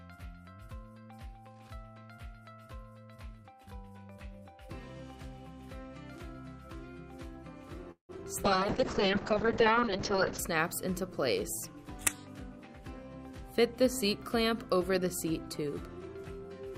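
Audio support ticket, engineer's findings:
Call audio freeze, 7.91–8.11 s. Sound stalls: last sound continues briefly, then about 120 ms of silence, then resumes where it stopped. Likely cause: delayed packets draining the jitter buffer. Roughly 176 ms of filler inserted, nothing lost, so latency grows by 176 ms.

Short concealed packet loss, 8.17–8.20 s. Brief smear right after the freeze. About 20 ms of audio never reached the decoder in time. The receiver extrapolated from the preceding sound and crossfaded back into real audio, causing a momentary blur.

Call bitrate drop, 8.45–10.45 s. Audio turns muffled and rough. Encoder rate cut from 64 kbps to 6 kbps, following a fall in the bandwidth estimate, and held at the floor for about 1.9 s. Coarser Opus coding, with audio bandwidth narrowed from 20 kHz to 8 kHz, removing the top end until the rate recovers.

Jitter buffer speed-up, 13.31–15.63 s. 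Playback runs slightly faster at unchanged pitch, about 104% speed. The buffer was over its target depth, so the receiver trimmed short pitch-period segments repeatedly, removing around a tenth of a second in total to bring latency back down.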